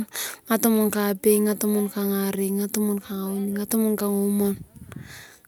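No audible technical faults: no dropouts, glitches or distortion anywhere in the recording.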